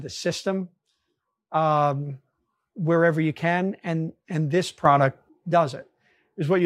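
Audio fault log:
4.85–5.29 s, sudden gain jump: the speech and the background noise together leap up by about 8 dB with no fade in, hold at that raised level for just under half a second, then drop back. Because the floor noise rises in step with the speech, this is not the talker getting louder but the whole signal being scaled at once, likely a digital gain setting or bit shift applied instantly instead of ramped.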